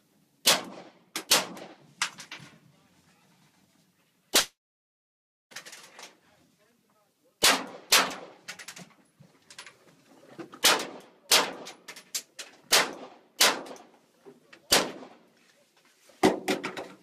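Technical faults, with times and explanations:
4.39 to 5.54 s, long network dropout: the sound turns into a brief fading buzz, then about 0.98 s of silence, likely from lost packets. Roughly 1.1 s never returns.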